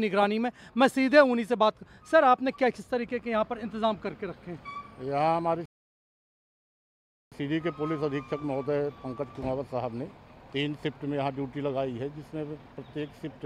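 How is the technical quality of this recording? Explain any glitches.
The recording has one clear glitch, a playback stall between 5.66 and 7.32 s. The player most likely ran short of data or had its output thread held up, so it had nothing to send to the output for about 1.66 s. The sound cuts off abruptly in mid-flow at 5.66 s, leaving a gap of dead silence, and only returns at 7.32 s once the player recovers and refills its output.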